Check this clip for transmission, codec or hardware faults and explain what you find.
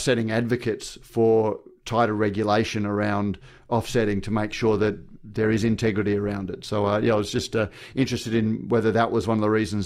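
One transmission fault is present: the adaptive stream drops to a lower bitrate for a stretch of the speech. From 4.48 s to 8.48 s, a 4-second span, quality switches abruptly with no gap in the audio. When the connection slowed, the player fetched a lower-quality rendition, and the encoder spent fewer bits per frame. Codec artefacts rise, consistent with Opus stepping from about 64 kbit/s to about 24 kbit/s. Full quality returns just as suddenly at 8.48 s.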